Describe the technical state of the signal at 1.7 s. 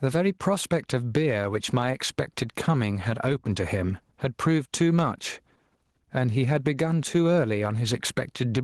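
At 1.7 s you're hearing gain pumping, present across the whole clip: gain likely set too hot, a fast limiter clamping it, the gain swinging by around 10 dB.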